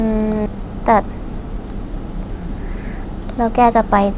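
At 0.46 s the speech lurches forward with no gap, a skip ahead: roughly 0.4 s was dropped and the surrounding audio spliced almost directly together. From 0.55 to 2.32 s the talking sounds slightly rushed at unchanged pitch, a jitter buffer speed-up running at 106% that trims short pitch-period slices, about a tenth of a second in total, to shrink excess delay over the band-limited G.711 call audio.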